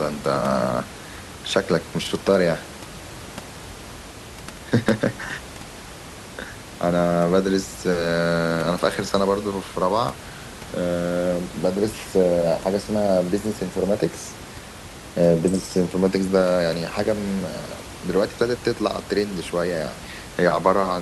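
No system faults detected in the speech; the only background is the room's own noise, sitting about 16 dB below the speaker.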